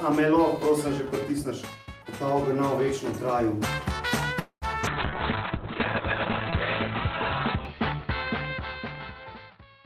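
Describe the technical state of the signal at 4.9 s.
Right at 4.82 to 4.86 s there is a short concealed packet loss. About 40 ms of audio arrived too late, so the receiver extrapolated the preceding sound to bridge the gap and then cross-faded back. You hear it as a momentary smear or wobble. Its brevity is what separates it from codec degradation.

From 4.91 s to the end, a call bitrate drop follows. The encoder falls from 48 to 6 kbps, bottoming out for 1.66 s, and the bandwidth narrows from 20 kHz to 4 kHz. The result is a sustained muffled, watery roughness rather than a single glitch.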